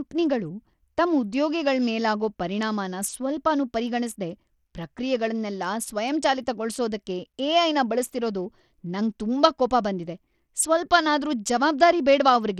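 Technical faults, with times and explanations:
Throughout: likely Bluetooth SBC compression. The speech treble flickers and thins under gritty quantisation noise, which fits roughly 80 kbps starving the upper sub-bands.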